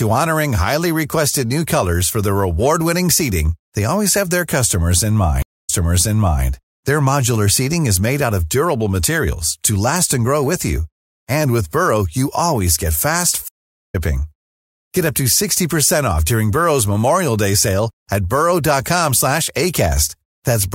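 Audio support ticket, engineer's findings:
Stream reconnect at 5.42–6.45 s and 13.48–13.95 s: about 250 ms and 430 ms of silence, then a fresh decoder resumes at a different point, not in place like a plain dropout. The first repeats about 0.78 s, the second skips roughly 0.3 s.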